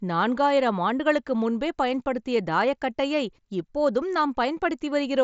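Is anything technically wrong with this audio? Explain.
No, nothing stood out as technically wrong on listening to this speech.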